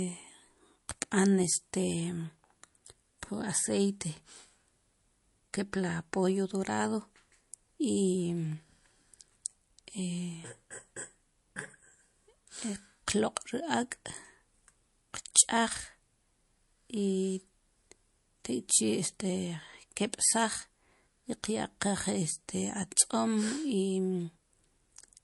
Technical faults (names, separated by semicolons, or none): MP3 compression